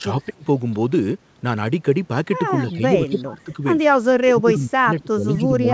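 Speech suppressed in double talk at 0.0 to 0.45 s, 2.62 to 2.83 s, 3.1 to 3.63 s and 4.21 s to the end. With both sides likely talking at once, the echo canceller turns the near voice down along with the echo. The sound dips by up to about 35 dB at the start, about 10 dB at 2.62 s, about 20 dB at 3.1 s, and about 25 dB through the final stretch. Echo leak at 2.69 to 2.73 s and 3.08 to 3.22 s: a faint copy of the sound returns 236 ms late, about 30 dB below it. This is likely because the far end's canceller left some loudspeaker pickup in its microphone signal.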